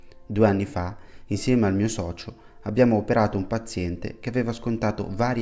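No audible technical faults occur anywhere in the audio.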